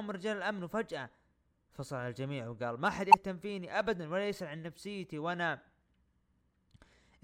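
A barely audible blip at 1.72 s and a loud squeaking burst from 3.11 to 3.14 s are corrupt frames decoded, damaged compressed data played back as misplaced energy.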